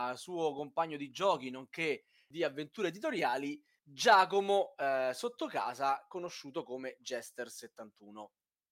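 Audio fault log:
No fault in this speech clip.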